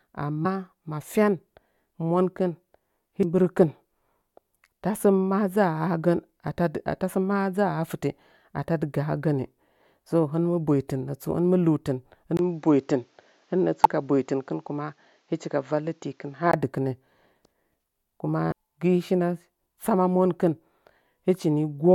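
Damaged data in the compressed stream makes the decoder misread frames and lose sync in this speech recording, causing brief glitches at 0.44, 3.23, 11.31 (just before "hɨn mɨ"), 13.84 and 18.51 s. From 12.37 to 16.54 s, the input likely switched to a poorer device: after a 20 ms gap, nothing above 7.6 kHz gets through, the sound turns duller, and faint new noise appears far below the speech while the level barely changes.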